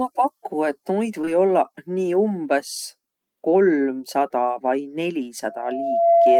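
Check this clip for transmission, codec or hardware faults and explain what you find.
Two kinds of fault are audible in this speech clip: a pair of concealed packet losses early on and a loudspeaker feedback squeal at the end.

Short concealed packet loss occurs twice back to back, at 1.21 to 1.25 s and 1.25 to 1.29 s. Each time, about 20 ms of audio arrived too late or not at all, and the receiver extended the preceding sound to cover the gap before blending back in. The result is a brief smeared wobble rather than silence or a click, which distinguishes it from a hard dropout.

A loudspeaker feedback squeal starts at 5.44 s and continues to the end. A single 679 Hz tone swells over roughly 0.7 s to about 10 dB above the speech. The microphone was hearing its own loudspeaker, and the loop's gain exceeded one at that frequency. Unlike steady interference hum, it grows on its own.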